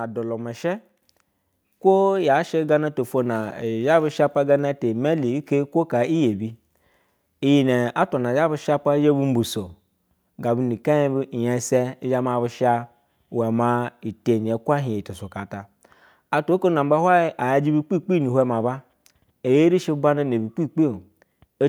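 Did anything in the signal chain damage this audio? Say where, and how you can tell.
Yes, a microphone volume stepped up at 1.02 s, right after "elulu mushe": voice and background jump about 6 dB together, so the call software raised the device input gain.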